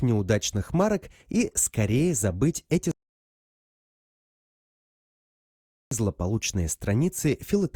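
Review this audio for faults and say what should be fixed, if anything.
A rebuffering stall occurs from 2.91 to 5.91 s: the player exhausted its downloaded audio and halted until more data arrived. The sound drops to silence for 3 s, then picks up exactly where it stopped, so nothing is lost but playback runs 3 s long. To prevent it, hold a deeper playback buffer and adapt to a lower bitrate when throughput falls.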